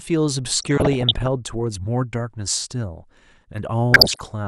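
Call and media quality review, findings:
DAB burbling in speech, 0.59 to 1.27 s and 3.92 to 4.28 s. Short noise blips over the speech. Weak reception leaves bit errors past error correction. Corrupted MP2 samples blip single sub-bands; corrupted scale factors make sub-bands jump in level for up to a frame. Second burst denser, fitting an error rate near one percent.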